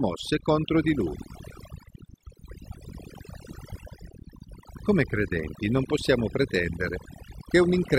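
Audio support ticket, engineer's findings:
Overdone noise removal, whole clip: quiet parts of speech lost, background near-silent with twinkling specks. Spectrogram shows gated, holed bands and isolated bins popping. Denoiser set too aggressive.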